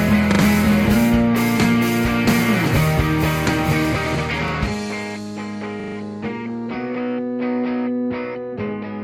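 Stutters in the music at 0.32, 4.48 and 5.8 seconds are repeated buffers: fresh audio arrived late, so playback looped the last chunk, which fits a 40 ms buffer. Each repeats with hard joins, two, one and four extra times, and nothing seems skipped afterward.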